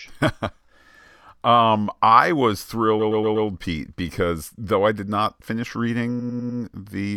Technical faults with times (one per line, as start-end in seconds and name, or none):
2.99-3.47 repeated frames
6.19-6.59 repeated frames